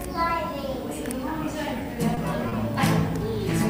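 From 1.65 s to 2.54 s the sound has repeated stalls (stutter): four short hitches where playback briefly hangs before moving on. Packets were reaching the receiver late, so its jitter buffer kept running dry, and each time it stretched the last bit of sound until fresh data arrived. About 80 ms is filled this way, with the longest wait 30 ms. Nothing drops out; the passage simply drags and catches.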